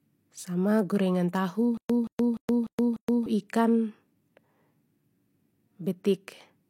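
Throughout, nothing sounds above 16.3 kHz and smeared low-bitrate artefacts persist. This is likely low-bitrate audio saved at a high bitrate, the MP3 unable to restore what was lost.

From 1.77 to 3.26 s, just after "gorengan tahu", a stutter with silent gaps repeats a 176 ms fragment five times, with 121 ms of silence between, likely from a stalled stream.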